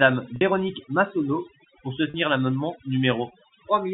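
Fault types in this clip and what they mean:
Overdone noise removal: Throughout this speech the background sinks to near silence dotted with small twinkling specks. A noise reduction stage was pushed too hard, so any frequency band sitting close to its noise estimate gets pulled far down or switched off, and the quieter parts of the speech are stripped away along with the noise.
Packet loss with pitch repetition: Twice the sound briefly hangs on a slightly held, buzzy tone, at 0.36 s for about 50 ms and at 2.10 s for about 40 ms. The audio was lost in transmission, and the receiver filled each gap by repeating the last pitch period before fading it out. Both gaps are short, so each one plays as a brief sustained buzz before normal speech resumes.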